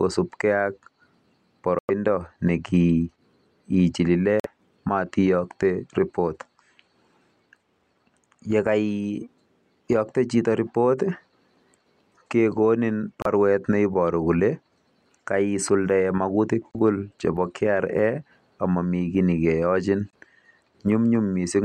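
Bluetooth stalls at 1.79, 4.40, 13.22, 16.71 and 20.10 s cut the speech to silence for 99, 46, 33, 25 and 25 ms, then resume where it left off. Interference likely delayed packets until the headphones' buffer ran dry.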